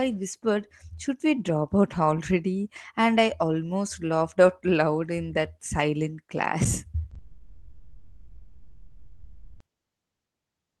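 At 7.10 s and again at 7.14 s there are two short concealed packet losses, each about 10 ms of audio arriving too late for the decoder. The receiver bridges each gap by extending the preceding sound, heard as a quick smear or wobble.

From 7.18 s to 9.61 s comes a long network dropout, likely caused by the stream stalling outright. About 2.4 s is never played. Concealment fills the stretch with a drawn-out, fading buzz or hiss rather than silence before the real audio resumes, still band-limited near 12 kHz as the Opus call path sounds at about 24 kbps.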